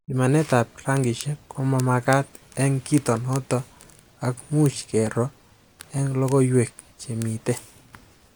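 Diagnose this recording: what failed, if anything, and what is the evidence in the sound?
Regular ticks run through the speech from 0.50 s to 7.81 s, about every 0.91 s, roughly ten in all. That steady spacing points to the driver/buffer stage, most likely clock drift buffer slips. Two devices on separate clocks disagree by something like 700 ppm, so the buffer between them creeps until a small block, a few dozen samples, gets dropped or repeated. Each slip leaves that click in the speech.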